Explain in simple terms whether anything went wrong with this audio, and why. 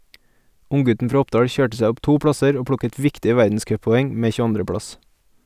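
Nothing went wrong with this speech recording that a listener can hear. At no point in it does anything stand out as a technical problem.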